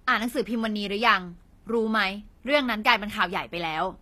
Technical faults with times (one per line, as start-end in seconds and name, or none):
0.00-4.01 HE-AAC compression